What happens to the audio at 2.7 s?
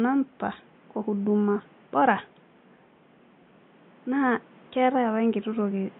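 Nothing goes wrong at 2.7 s: the speech carries on intact there, with only the room's own background noise sitting about 30 dB beneath it.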